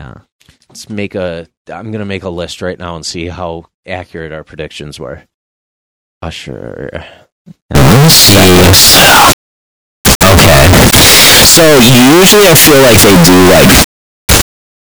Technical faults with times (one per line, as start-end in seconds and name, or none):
7.75-14.91 float read as integer